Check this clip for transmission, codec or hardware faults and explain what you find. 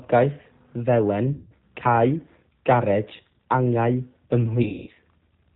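Two faults are present: low-bitrate codec damage throughout the speech, and two bursts of concealed packet loss.

The G.729 codec colours the whole clip, audibly so, which fits an 8 kbit/s G.729A stream. The decoder rebuilds speech from a vocal tract filter, pitch predictor and sparse pulses, discarding everything above 4 kHz. The speech sounds band-limited, slightly rough and synthetic.

VoIP packet loss concealed by the speech codec occurs at 1.33–1.52 s (180 ms lost, consistent with six 30 ms packets) and at 4.63–4.90 s (210 ms lost over 240 ms, longest run 180 ms). The decoder extrapolates its last pitch and filter with falling gain, stretching the sound into a tone or coloured noise that fades before speech recovers.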